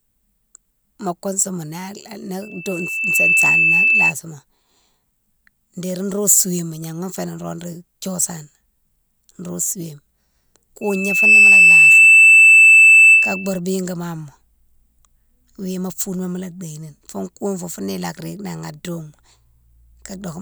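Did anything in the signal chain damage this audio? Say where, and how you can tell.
Yes, there's loudspeaker feedback squeal in the analogue stage. A steady 2.6 kHz tone swells up within a second, riding well above the speech, at 2.42–4.13 s and again at 10.81–13.60 s. The mic hears its own speaker, and loop gain at 2.6 kHz tops one.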